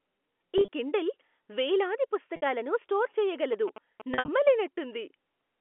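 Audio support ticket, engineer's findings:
Packet loss with pitch repetition: 0.58–0.68 s, just before "కిండిల్ వేలాది", about 70 ms gone in patches over 100 ms, longest 30 ms. 2.36–2.42 s, right after "కిండిల్ వేలాది", 60 ms. 4.14–4.28 s, 120 ms over 140 ms, longest 60 ms. Receiver repeats the last pitch period, so each gap sounds like a brief buzzy held tone. The longer runs fade before the speech cross-fades back. Fits 10 ms packets.

GSM signalling bursts: 3.53–4.49 s, galloping ticks and short 217 Hz buzzes, about 15 dB under the speech, overlapping the last dropout. A nearby 2G phone was sending short signalling bursts, not a full call, and something in the audio chain rectified the RF into the audio path. Line itself is G.711 A-law with the usual 250–3400 Hz telephone band.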